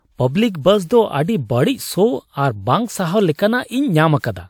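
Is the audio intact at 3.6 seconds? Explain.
No. At 3.6 seconds the speech carries transcoding between lossy codecs, which runs through the whole clip. The likely cause is MP3 encoding at around 100 kbit/s followed by WMA at around 96 kbit/s. The second encoder spends bits on the first one's artefacts and adds its own, so the different artefacts are heard together. Unlike a single codec pass, the artefacts sound layered rather than uniform. The lowest cut-off in the chain stays, with nothing above about 20.1 kHz.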